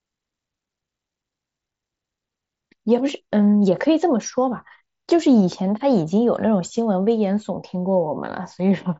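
Nothing goes wrong anywhere in this speech recording; it simply carries the usual character of a Bluetooth mSBC headset link, with the sound topping out around 8 kHz and a faint graininess riding on the louder moments.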